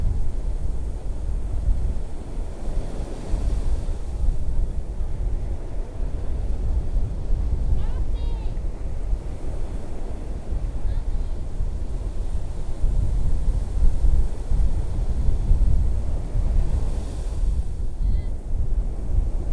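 No technical faults are audible.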